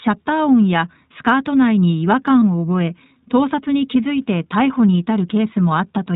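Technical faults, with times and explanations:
Throughout, iLBC codec: the speech is band-limited to nothing above 4 kHz and has a slightly rough, synthetic edge that's plainly audible. Each frame's excitation is coded on its own, and the character fits the 15.2 kbps mode with 20 ms frames.
2.41 s, lost iLBC frame: there's a brief 20 ms patch where the decoder fills the gap by repeating the last pitch cycle mixed with a bit of noise, giving a short buzzy held-vowel blip. That points to a single lost frame, and since iLBC frames stand alone, the speech snaps back right away.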